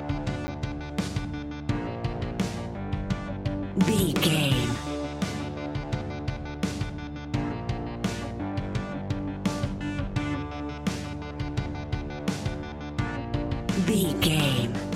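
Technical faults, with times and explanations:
0.47 s, block of digital silence: a 10 ms stretch of the audio drops straight out and comes straight back with no fade, so both hard edges land almost on top of each other and you hear a single quick tick rather than a gap.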